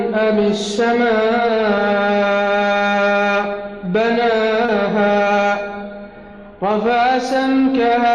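At 4.66 to 4.70 s there is a brief smear, a short stretch where the sound seems to hang on itself with a wobble before the real signal returns. This is short concealed packet loss: about 20 ms of audio never arrived in time, so the receiver synthesised roughly 21 ms to cover the gap, extending what it had just played and then crossfading back into the incoming audio, which leaves that blurred seam.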